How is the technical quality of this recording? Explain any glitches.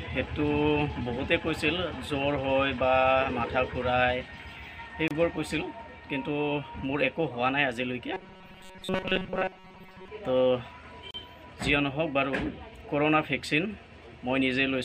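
The recording has two kinds of fault: brief dropouts at joins and a stretch of mechanical buzzing.

Gap at a join of encoded pieces, at 5.08 to 5.11 s (28 ms) and 11.11 to 11.14 s (about 34 ms), six seconds apart. The audio appears to have been encoded in separate pieces and joined without trimming the encoder's start-up delay and end padding. That leaves a short hole of silence in continuous sound, with edges blurred by the codec, before the sound resumes from exactly where it stopped.

Robotic sound from repeated short buffers, from 8.14 to 10.08 s. The audio turns into a rigid, metallic buzz pitched at 188 Hz that only loosely follows the underlying sound. This is likely caused by new audio arriving too slowly, with the playback software repeating its last tiny chunk, about 5.3 ms long, to fill the time. Most of the real audio in that stretch is skipped, and the fixed repetition rate imposes its own steady tone.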